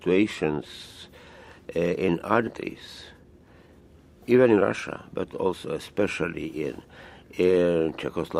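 A skip ahead occurs at 2.47 to 2.49 s. Roughly a second of audio was discarded, either lost in transit or thrown out by the jitter buffer when it overflowed while later audio was already queued. Nothing fills the cut, so the material on either side is butted together and playback lurches forward. The listener's delay shrinks by about a second at that moment.

Jitter buffer speed-up follows at 2.57 to 3.82 s and again at 4.24 to 5.75 s. The buffer was holding more audio than its target, so the receiver repeatedly cut out short stretches of one or a few pitch periods to catch up. The first stretch plays at 115% speed and sheds about 200 ms. The second plays at 120% and sheds about 300 ms. Pitch stays the same, but the sound is audibly hurried in both passages.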